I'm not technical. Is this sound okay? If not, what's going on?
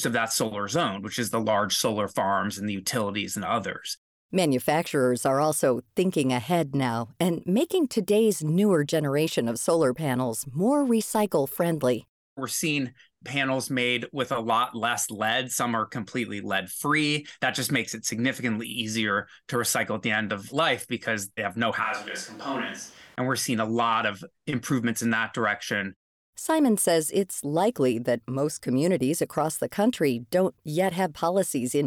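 No. Around 21.84 to 23.15 s, just after "because they have no", the recording likely switched to a distant microphone, so the voice briefly turns hollow, roomier, quieter and noisier.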